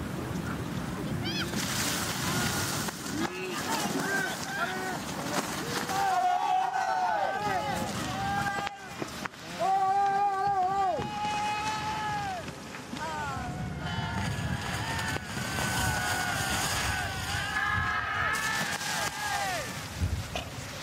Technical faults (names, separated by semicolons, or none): AAC frame loss with concealment